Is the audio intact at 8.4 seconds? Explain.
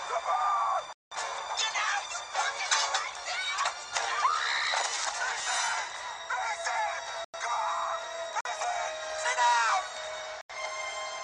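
No. From 8.41 to 8.45 s, about 46 ms, a block of samples was replaced by zeros, which fits a 2048-sample block. This block of digital silence cuts in and out with no fade, leaving a short hole in the sound.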